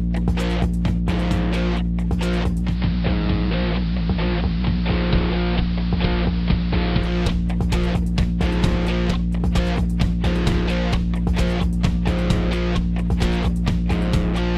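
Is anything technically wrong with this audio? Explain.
Yes. From 2.62 s to 7.17 s there is digital radio blending to analogue. The receiver lost the digital stream and cross-faded, over about 0.23 s, to the station's AM broadcast. It blended back at the end. AM carries far less bandwidth, so the treble falls away and the sound turns dull and narrow. Hiss comes up to roughly 20 dB below the audio. The level holds steady across both blends.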